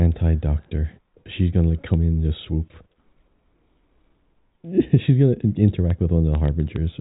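No technical faults can be heard in this speech.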